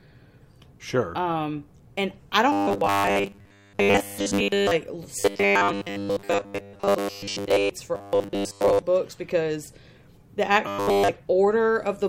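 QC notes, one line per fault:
2.52–4.71 s, after "and I": robotic sound from repeated short buffers. Audio likely arrived too seldom, so short chunks looped over most of the real signal, forcing a rigid metallic buzz at 100 Hz, which fits a 10 ms buffer.
5.20–7.70 s: robotic sound from repeated short buffers. The stream was likely starved, and repeating 10 ms segments replaced most of the real audio, leaving a fixed 100 Hz metallic drone that only loosely follows the speech.
7.95–8.82 s, just before "books because": robotic sound from repeated short buffers. Incoming audio was likely late, so most of this stretch is looped 10 ms chunks, heard as a stiff 100 Hz buzz.
10.68–11.09 s: robotic sound from repeated short buffers. With delivery likely stalled, repeats replaced essentially all of the real audio here, so this stretch is a rigid 100 Hz metallic buzz.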